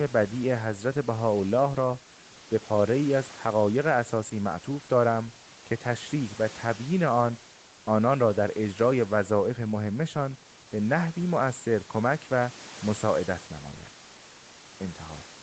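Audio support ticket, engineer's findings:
No faults found in this speech recording.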